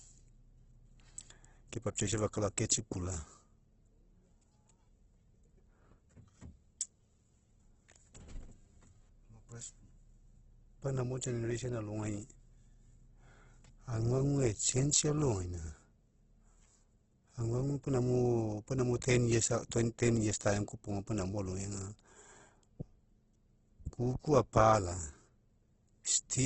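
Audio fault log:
Throughout, Opus compression: the speech sounds rough and grainy, with a noisy texture on the vowels and nothing at all above 8.1 kHz. This is likely heavy Opus coding in its music (CELT) mode at a rate that fits about 12 kbps. Short of bits, it keeps each band's energy but fills the detail with folded or noise-like content. On a spectrogram, a hard ceiling at 8.1 kHz sits over speckled, smeared harmonics.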